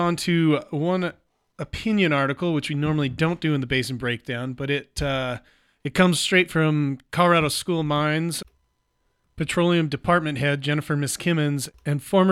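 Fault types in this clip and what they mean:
Nothing here to flag: the speech comes through without any audible technical problems.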